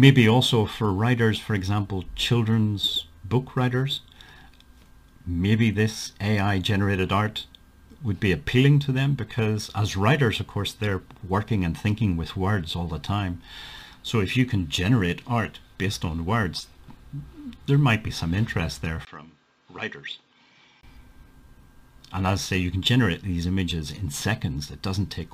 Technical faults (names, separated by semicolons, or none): input switched to a poorer device